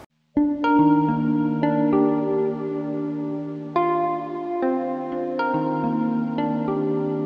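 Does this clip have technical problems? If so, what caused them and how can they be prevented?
No, nothing stood out on listening.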